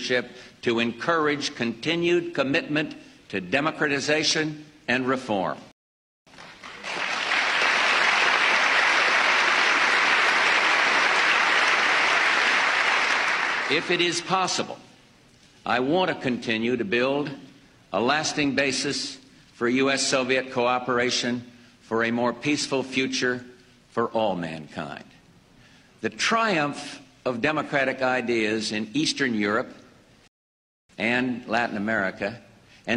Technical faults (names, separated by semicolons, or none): rebuffering stall